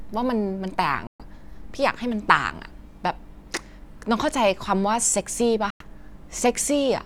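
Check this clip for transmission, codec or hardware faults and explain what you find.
Two short gaps break up the speech, at 1.07 to 1.23 s and 5.70 to 5.85 s, and they look like a likely Bluetooth dropout each time. The sound cuts out cleanly for roughly 0.1 s, then comes back further along, as if it kept playing underneath. That fits packets not reaching the headphones in time and being discarded, with the output going silent until good data arrived. Each gap matches a handful of lost audio frames.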